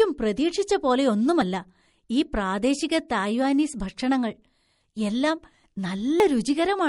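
Speech recording with plainly audible watery, swirling codec damage throughout, likely from MP3 compression at a low bitrate, around 48 kbps, where weak frequency components drop in and out between frames. The audio skips forward at 1.42 s and 6.2 s, losing about 20 ms and 70 ms respectively, with no gap of silence. These jumps are likely dropped buffers from an overrun, where unread samples were overwritten and the surrounding audio spliced together.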